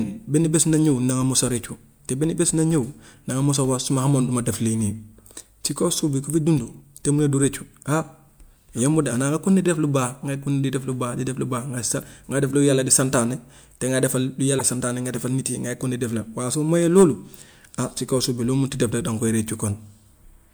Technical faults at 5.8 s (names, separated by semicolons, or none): none